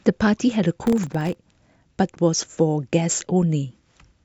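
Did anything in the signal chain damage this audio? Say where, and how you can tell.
Yes, there's processor overload crackle at the driver and buffer stage, from 0.87 to 1.35 s. For about half a second the speech picks up a gritty, tearing crackle, then clears once the load drops. The processor was missing its deadlines on very short buffers, each well under a millisecond, and a few dozen of them across that stretch came out as hard-edged silent gaps. Strung together that closely, those tiny dropouts read as crackle rather than separate clicks.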